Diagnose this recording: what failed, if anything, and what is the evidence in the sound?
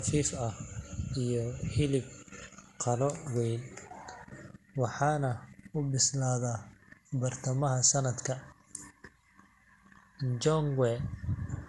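Generation loss runs through the whole speech clip, at the codec stage. The sound is swirly and hollow, consonant attacks are smeared, and nothing survives above 11.8 kHz. That is more damage than a single pass would leave, and the character points to an MP2 encoder at around 96 kbit/s. The likely cause is repeated decoding and re-encoding, perhaps ten times over. Each pass quantised on a shifted frame grid, so noise and spectral gaps accumulated.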